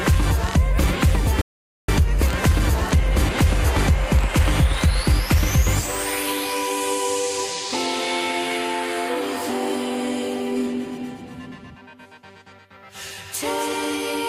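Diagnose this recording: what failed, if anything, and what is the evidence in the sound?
At 1.41 s the sound drops abruptly to silence and picks up again at 1.89 s exactly where it left off, with nothing skipped. That points to a rebuffering stall at the playback stage: the player exhausted its downloaded audio and waited, adding about 0.47 s.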